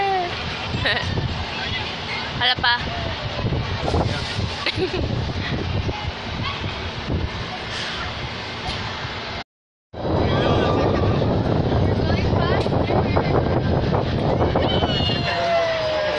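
A dull, band-limited sound runs through the whole recording. The top end is missing, and upper detail flickers in and out. What remains has a gurgling, granular roughness. This is the signature of MP2 compression. The encoder, likely MPEG Layer II at a rate in the region of 80 kbps, has too few bits to spread across its 32 sub-bands. It switches whole upper bands off from moment to moment and quantises the surviving ones coarsely, which is plainly audible here. Between 13.17 and 13.51 s a brief burst of bubbling, squelchy chirps sits on top of the audio, like mud boiling for about a third of a second. That is DAB burbling. Bit errors at a rate of a small fraction of a percent slipped past error correction into the MP2 data. Corrupted samples then put short blips of noise into individual sub-bands, frame after frame, across the whole span.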